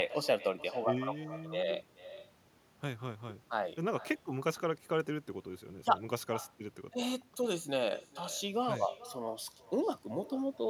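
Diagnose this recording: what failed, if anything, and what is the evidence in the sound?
Call processing failed: echo with no canceller runs throughout the speech. The far end's loudspeaker feeds its microphone and nothing removes it, so every phrase returns roughly 0.4 s later, about 17 dB down and thinner. A spectrogram shows faint delayed copies trailing each syllable.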